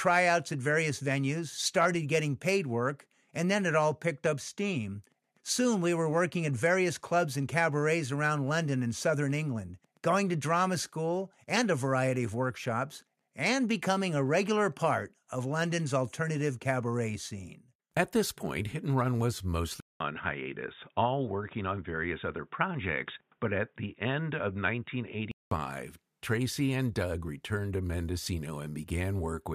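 At 19.80 s, after a 200 ms silence, speech turns dull, nothing above 3.8 kHz, until 25.51 s: input likely switched to a poorer device.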